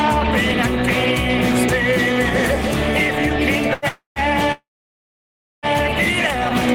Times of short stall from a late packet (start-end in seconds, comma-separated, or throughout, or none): 3.73-3.85